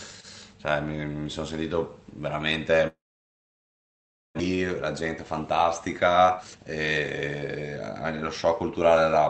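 From 2.87 to 4.41 s there is a long network dropout, likely caused by a stall in packet delivery. The sound at the break is carried on briefly as a fading buzz, then about 1.4 s of near-silence follows. When the speech resumes, roughly a second of it is simply gone. A short packet-loss glitch only smears a few tens of milliseconds. Here the gap lasts far longer, and the speech picks up further on rather than where it stopped.

Straight afterwards, from 4.48 to 6.66 s, a jitter buffer speed-up plays the speech about 15% fast. The receiver is clearing the backlog left by the stall, about half a second of extra delay, by cutting out tiny pitch-period slices, roughly 0.3 s in total. A milder pass from 8.22 to 9.25 s runs about 8% fast and removes around a tenth of a second. The speech sounds hurried, but its pitch does not rise, which is what separates this from a sample-rate or pitch error. 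The narrowed top end, cut off at 8 kHz, comes from the Opus call path and is not part of either fault.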